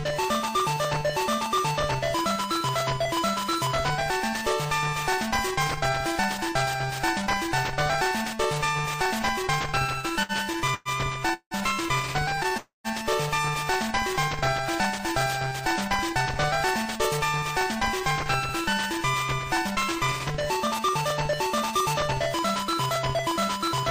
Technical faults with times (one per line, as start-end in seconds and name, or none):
9.79-12.54 repeated stalls (stutter)
12.57-12.87 call audio freeze
16.98-18.01 jitter buffer speed-up
20.63-23.70 jitter buffer speed-up